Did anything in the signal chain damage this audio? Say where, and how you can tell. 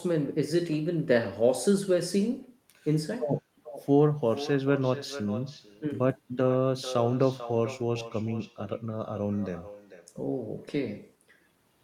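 Yes: echo with no canceller at the call-processing stage, from far-end loudspeaker pickup. Throughout, speech recurs roughly 0.4 s later, about 13 dB down, as faint trailing spectrogram copies.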